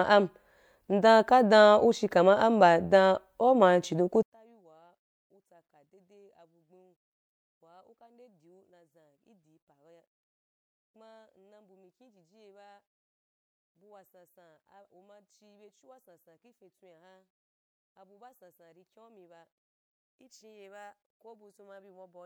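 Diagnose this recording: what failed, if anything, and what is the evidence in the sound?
The speech collapses at 4.23 s, right after "chidon ku", and stays collapsed to the end. The level drops by about 37 dB. What remains is a faint residue, with the centred voice almost gone. That points to one channel inverted, likely from a polarity swap in the analogue wiring. The two channels carry nearly identical speech. When they are summed to mono with one flipped, they cancel, leaving only their small differences.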